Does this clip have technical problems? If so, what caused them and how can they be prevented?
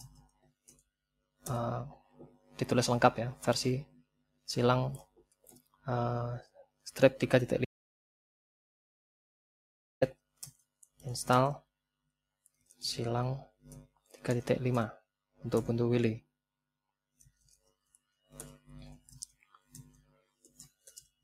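Yes. Throughout, the level pumps and thins by roughly 5 dB as held parts and decays sink while attacks pass. This is a noise suppressor applied to music or sounds: a speech-tuned suppressor treating sustained tone and ambience as noise. Bypass suppression for non-speech material.

Sound cut by the noise suppressor appears as sudden dips at 0.19–0.88, 1.98–2.58, 3.86–4.48, 5.02–5.87, 6.42–6.90, 10.14–10.61, 19.92–20.24 and 20.43–20.70 s, by about 11 to 21 dB. The suppressor misjudged these steady or fading stretches as noise. Disable it or use a music mode.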